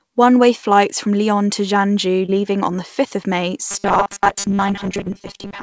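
Short concealed packet loss at 2.26 to 2.30 s, just before "leaving on the": about 20 ms of audio never reached the decoder in time, and the receiver covered the gap by extending the preceding sound for roughly 22 ms before blending back into the real signal. It comes across as a brief smear rather than a hard dropout.

Robotic sound from repeated short buffers from 3.71 s through to the end: the speech takes on a rigid, metallic buzz locked at 200 Hz that still loosely follows the syllables. The likely cause is audio arriving too infrequently, with the software looping a 5 ms slice (one over 200 Hz) to fill the time, replacing most of this stretch and discarding the real audio in between.

A second short concealed packet loss at 4.42 to 4.46 s falls inside that buzzing section. About 20 ms was lost and roughly 15 ms was filled by continuation, adding a brief smear or wobble to the already robotic sound. 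Throughout, the call path's band limit leaves nothing above 8 kHz.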